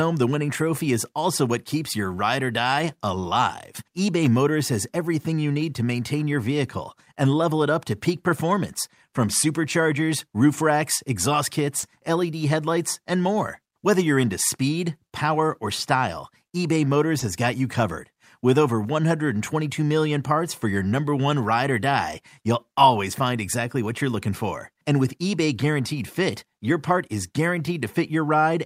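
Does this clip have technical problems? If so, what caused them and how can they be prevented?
Yes, there is short concealed packet loss twice: about 40 ms at 11.79 to 11.85 s and about 20 ms at 17.19 to 17.23 s. Audio arrived too late for the decoder, which extended the preceding sound and crossfaded back, heard as a brief smear. On a spectrogram each gap shows smoothed, repeated harmonics or uniform noise with detail missing; the waveform shows a short repeated cycle. A larger jitter buffer or forward error correction would prevent it.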